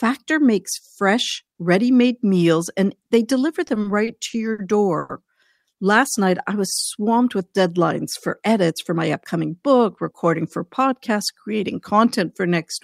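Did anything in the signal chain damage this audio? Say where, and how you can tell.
Yes. Network stage: packets arrived late, so the jitter buffer repeatedly ran dry. Repeated stalls (stutter) from 3.67 to 4.60 s: six gaps filled with continued sound, about 170 ms total, longest 60 ms.

A call audio freeze from 4.98 to 5.11 s holds the last sound for 110 ms without going silent, then resumes, 110 ms later. Likely cause: a network hold-up emptying the jitter buffer.

Jitter buffer speed-up from 8.28 to 9.42 s: the receiver trimmed small pitch-period slices, about 70 ms in all, so speech runs at 106% speed, same pitch, slightly hurried.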